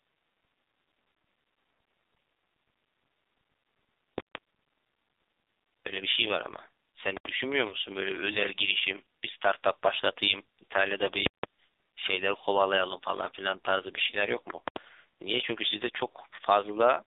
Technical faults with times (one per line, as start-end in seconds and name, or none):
0.00-17.06 AMR narrowband mobile codec
4.18-4.35 invalid numbers at full scale
7.17-7.25 invalid numbers at full scale
7.68-7.75 lost AMR speech frames
11.26-11.43 invalid numbers at full scale
14.10-14.15 lost AMR speech frames
14.68-14.76 invalid numbers at full scale
16.36-16.39 lost AMR speech frames